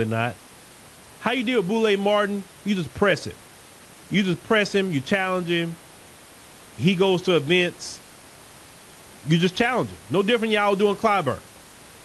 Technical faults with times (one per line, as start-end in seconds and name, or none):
none